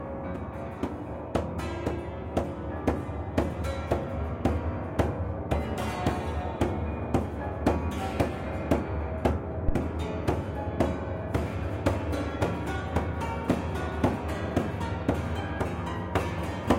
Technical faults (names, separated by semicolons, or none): phantom power thump